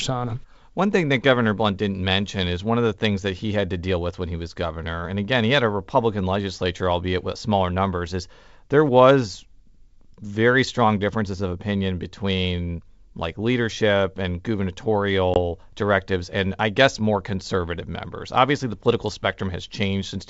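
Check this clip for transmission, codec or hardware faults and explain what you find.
One transmission fault stands out: a short dropout late in the speech, heard against wideband sound consistent with G.722 coding at 64 kbit/s.

At 15.34 to 15.38 s, just before "directives and I guess", a hard-edged hole of about 20 ms cuts the speech, which then comes back briefly unsteady before settling. This is packet loss on an ADPCM call. What sounds like a single lost packet was filled with silence, so the receiving decoder's adaptive predictor and step size drifted out of step with the sender's and took some tens of milliseconds to realign.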